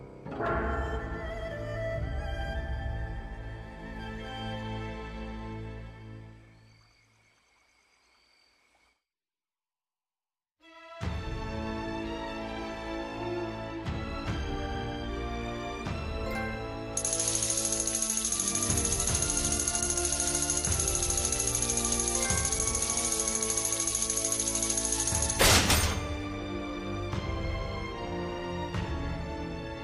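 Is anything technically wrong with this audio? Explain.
No, nothing is technically wrong with this audio.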